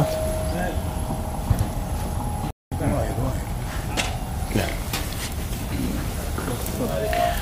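At 2.51 s the sound cuts to silence in mid-flow for about 210 ms, resuming at 2.72 s. This is a playback stall, likely caused by the player running short of data or its thread being blocked, so output halted until it caught up.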